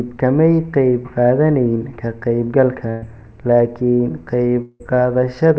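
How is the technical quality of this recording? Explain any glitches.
The recording has two audible glitches in the speech, and the sound carries nothing above 8 kHz, which points to a wideband call codec such as G.722 at 64 kbps.

From 2.90 to 3.04 s, the sound briefly freezes into a held, fading buzz or hiss for about 120 ms, then jumps ahead. This is a burst of packet loss: several packets went missing, the receiver stretched the last sound to cover them, and about 120 ms of speech was skipped.

From 4.62 to 4.82 s, a longer smeared, decaying tone runs for about 180 ms and ends in a short moment of silence before the speech resumes further on. The likely cause is a long network dropout, with the receiver filling the gap until it had nothing left to extend, so about 180 ms of speech is missing.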